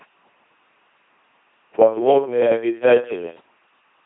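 From start to finish, the speech runs through an LPC-10 vocoder at 2.4 kbit/s, and the damage is heavy. The voice has no natural source left. A filter of up to ten poles shapes either a pulse train or noise. Each moment is forced to be fully voiced or fully unvoiced. The result is a buzzing, mechanical robot voice. Wrong voicing choices give stray buzz or hiss. Nothing sounds above 3.8 kHz.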